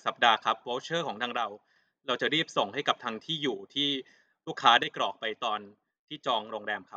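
At 1.37 s the speech drops abruptly by about 6 dB and holds there until 1.76 s. It drops again at 4.83 s and stays low to the end. This is most likely one channel dropping out: with one stereo side gone, the mono sum keeps only half of the shared signal. A gain dip or fade would ramp, but these steps are instant and exactly halve the level.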